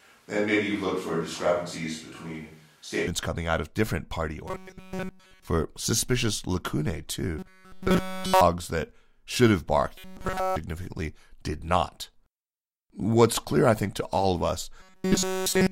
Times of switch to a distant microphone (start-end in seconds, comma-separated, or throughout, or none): 0.00-3.07